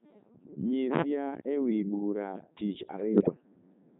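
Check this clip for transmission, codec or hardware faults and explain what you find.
Three faults are present: a very low-rate vocoder throughout, one dropout, and a burst of bit errors near the end.

Codec 2 vocoder, throughout: the speech was reduced to pitch, voicing, energy and a spectral envelope, then rebuilt from sine waves. The damage is heavy, and the buzzy, robotic, waveform-free quality fits Codec 2's 3.2 kbit/s mode.

Digital wireless dropout, 1.41 to 1.47 s: the link lost too much data and the receiver muted for 60 ms. It leaves a clean gap of near silence, entered and left with a very short fade, with no noise burst on either side.

Bit errors on digital voice radio, 3.13 to 3.34 s: flipped bits, at a rate of a few percent, corrupted several vocoder frames. Because each bit sets a frame's pitch, level, voicing or spectrum, the voice jumps in pitch and tone colour and breaks into warbles and robotic gibberish.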